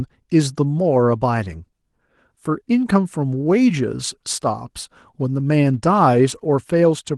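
No technical faults can be heard anywhere in this speech recording. Nothing in the audio stands out as a defect at any point.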